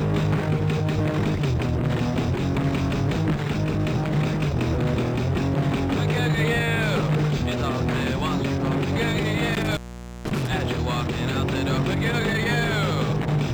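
Intermittent contact disturbs the audio between 9.54 and 10.47 s, where a loose cable or plug momentarily opens and the signal drops out for roughly 0.48 s inside that window. The cut is bracketed by scratchy crackle as the connection breaks and remakes, and faint hiss remains while the line is open. That edge crackle and residual hiss are what separate it from a digital dropout, which leaves clean, abrupt silence without any contact noise.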